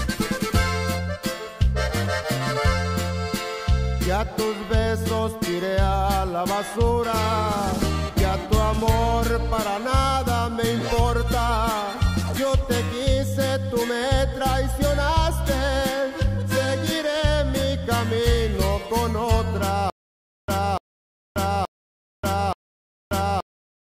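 At 19.90 s the audio breaks into a stutter with silent gaps that lasts to the end. A burst of about 293 ms repeats four times, each followed by roughly 583 ms of digital silence, giving a steady cycle of about 876 ms. The likely cause is a stalled player or stream that replays its last buffered fragment on each retry and then runs dry. Whatever should have played during those final seconds is missing.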